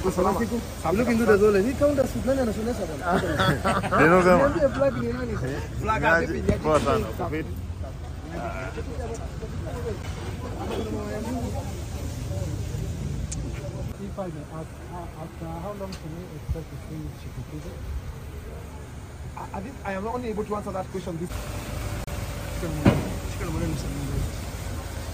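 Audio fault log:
2.02 s, 10.03 s and 22.04–22.08 s: gap between stream segments. Segment timestamps don't quite meet, so the player inserts silence. You hear hard-edged dropouts of about 15, 11 and 33 ms on a 4-second grid, which fits 4-second segments. Nothing is lost, just pushed later.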